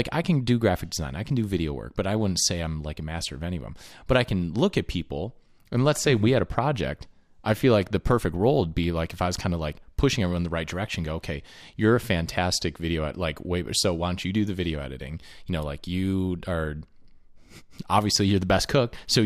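A speech recording with no technical fault to report. Nothing in it needs a time, a value or a cause.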